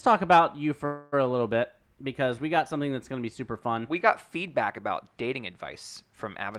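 At 0.85 s, just after "talk about you", the sound stalls into a fading buzz or hiss for about 0.27 s before resuming at 1.24 s with "a little bit because". This call audio freeze is likely a jitter buffer running empty while packets were delayed; nothing is lost, only postponed.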